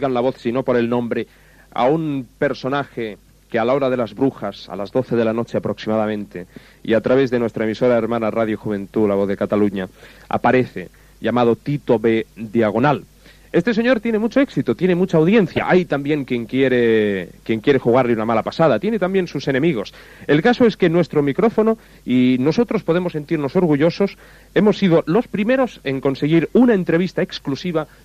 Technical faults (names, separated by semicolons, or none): DAB burbling